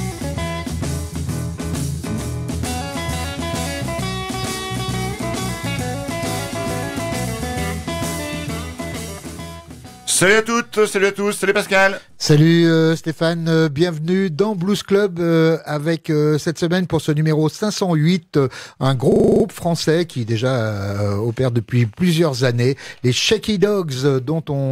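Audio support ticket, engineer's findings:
System hang loop, 19.12 to 19.44 s. One 40 ms slice repeats 8 times, giving a rattling buzz at 25 Hz. Probable component: driver or host stall while hardware replays its ring buffer, which fits a 40 ms buffer. Little audio appears lost.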